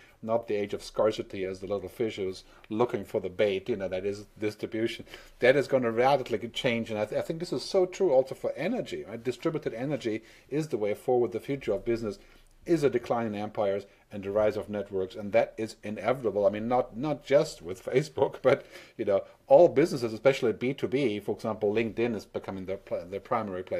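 No faults are audible anywhere in this audio.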